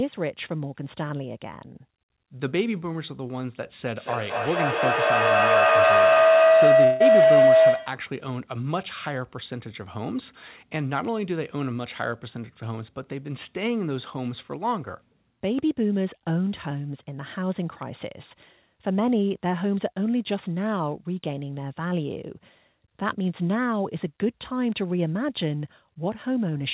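From 3.98 s to 8.17 s a feedback howl builds up. The loop from a loudspeaker back into a microphone on the same call gains level on every pass, so each repeat comes back stronger and narrower until a single tone of around 700 Hz dominates, peaking about 9 dB above the speech. Unlike a steady electrical hum, it swells and pulses at roughly a fifth of a second, the loop's round-trip delay, and ends only when the loop is broken.

At 6.84 s, inside the howl, about 0.18 s of sound goes missing, most likely a long network dropout. The receiver covers the missing 160 ms by stretching the last sound into a fading buzz, so the gap never drops to silence. Unlike a brief packet loss, the whole stretch is lost and is never played. Sound resumes at 7.02 s with that piece absent, all within the narrow telephone band that stops at 4 kHz.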